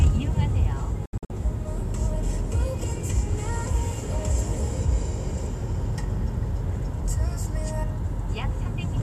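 From 1.06 to 1.30 s, a digital broadcast dropout mutes the sound in several short holes, the longest about 72 ms, as the receiver discards failed frames.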